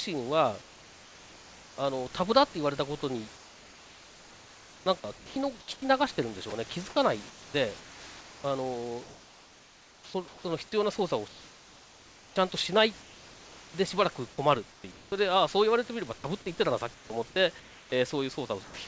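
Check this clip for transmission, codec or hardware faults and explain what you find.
Two transmission faults are audible, both tied to the sender's voice-activity detection and discontinuous transmission, on a speech clip carried over a call path whose content stops at 8 kHz, which fits wideband G.722.

Comfort noise in place of the background, 0.62 to 1.78 s: the sender likely stopped transmitting when its voice detector judged the pause silent, and the receiver filled the gap with synthetic noise. For about 1.16 s, the real room background, sitting roughly 26 dB below the loud parts, is swapped for a smooth, featureless hiss about 3 dB quieter, which fits standard RFC 3389 comfort noise.

Sound chopped by the voice detector, 3.36 s to the end: the detector repeatedly toggled between sending and muting, likely misjudging quieter stretches as non-speech. Across this span, roughly 6.9 s in total is replaced by generated noise, so soft syllables and word edges drop out and the speech comes across as choppy. 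The genuine room noise sits about 24 dB below the speech.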